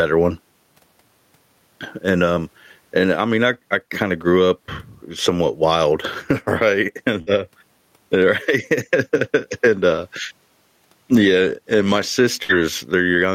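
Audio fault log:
throughout, gain pumping: The level swings by about 15 dB, so the speech sounds squashed and flat. The likely cause is input gain set far too high, with a fast limiter clamping down on every peak.
7.21–7.30 s and 12.43–12.52 s, burst of packet loss: Each time the speech freezes into a held, fading buzz or hiss for 53 ms and then 61 ms, then jumps ahead with about 60 ms missing. A run of packets went missing, and the receiver stretched and faded the last sound to cover the gap.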